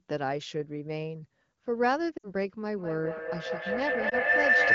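From 2.17 to 2.32 s there are lost AMR speech frames. About 60 ms of coded speech failed its checks, which fits three consecutive 20 ms frames. The decoder carried the last good pitch and vocal tract settings forward at falling gain, so the sound smears briefly and sinks. This is not a hard gap or click. Because the wideband decoder fades concealment quickly, the sag is short, and the speech returns weak or rough for a moment.

A feedback howl starts at 2.68 s and runs to the end of the clip. It is a tone near 2 kHz that swells and peaks about 8 dB above the speech. Unlike an echo, whose repeats die away, this loop from loudspeaker back into a microphone gains level on each trip, so the repeats grow and narrow onto the one frequency the loop favours.

From 4.09 to 4.14 s, inside the howl, a single lost AMR speech frame of 20 ms gives a quick dip and warble in the speech rather than a drawn-out fade.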